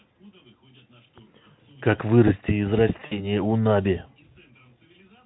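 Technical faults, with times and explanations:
3.05 to 3.31 s, VoIP packet loss concealed by the speech codec: about 60 ms of the stream goes missing, which fits three lost 20 ms frames, and the Speex decoder fills the gap by repeating its last pitch and vocal-tract shape while turning the level down. You hear the speech smear into a buzzy tone or coloured noise that fades, and because each rebuilt frame leans on the one before, it stays thin and a bit off until around 3.31 s, well after the audio picks back up.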